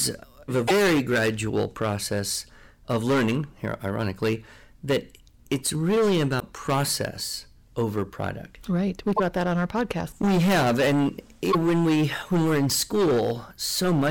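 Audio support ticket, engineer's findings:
Harsh fuzz on every loud syllable, crackle riding the speech peaks throughout the recording. Hard clipping, overdriven by about 17 dB, with around a tenth of the samples pushed past full scale. Probable component: input gain or converter stage. Peaks are sliced flat at the ceiling, and the squared-off tops spray harmonics high into the spectrum.

Short chirps, squawks, clicks or holes at 0.64–0.71 s, 6.36–6.42 s, 9.16–9.20 s and 11.48–11.55 s, each 40 to 70 ms. Damaged data in a compressed stream. Probable component: file storage or network transport feeding the decoder. Corrupt bytes make the decoder misread frames, lose sync and skip to the next valid frame header.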